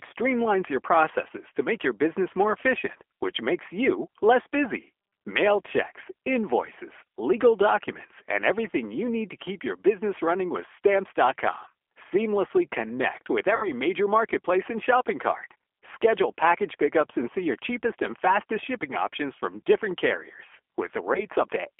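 Throughout, the speech has been through the G.729 codec at 8 kbit/s, heard over a 300 to 3400 Hz telephone band. The damage is plainly audible: the voice is rebuilt from a vocal tract filter, a pitch predictor and a few pulses per short frame, so it comes out rough and faintly synthetic. Simple band-limiting would only dull the sound; what gives away a low-rate model codec is this buzzy, artificial texture.

From 13.56 to 13.69 s, VoIP packet loss is concealed by the speech codec. About 60 ms of audio is missing, which fits six lost 10 ms frames. Instead of a gap, the decoder repeats its last pitch and filter at falling gain, so the sound smears into a fading buzz or coloured noise. Because each new frame builds on the damaged state, the voice stays weak past the loss itself. A plain dropout would be silent or click instead.

At 21.14 to 21.22 s, the same concealment covers a 10 ms loss, heard as a brief smear and a short weak recovery.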